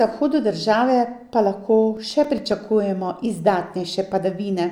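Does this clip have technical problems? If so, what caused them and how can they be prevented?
Yes. CD scratch ticks run from 1.56 to 2.93 s: eleven brief ticks, the longest about 4 ms, about eight a second. A disc blemish defeats error correction on each rotation. Cleaning or replacing the disc, or using a secure ripping mode, prevents this.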